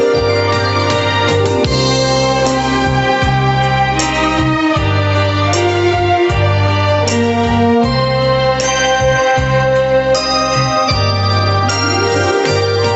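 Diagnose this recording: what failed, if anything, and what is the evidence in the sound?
The level is pulled down all the way through each time a loud sound arrives, a swing of roughly 5 dB, leaving loud and soft passages squashed closer together. This is gain pumping at the microphone input, likely from input gain set far too high, so a fast limiter or compressor clamps down on every peak and lets go in the pauses. The top end stops near 8 kHz, as a wideband call codec would leave it.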